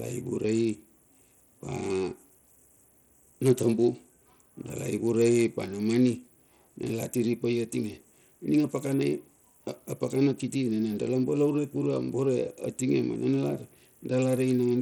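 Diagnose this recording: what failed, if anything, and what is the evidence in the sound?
The speech is audibly damaged throughout. The top end flickers and drops out, and a gritty, aliased noise clings to the sound. The stage is the codec, likely Bluetooth SBC compression. The damage fits a starved bit pool, roughly 80 kbps, leaving the weak upper sub-bands with few or no bits.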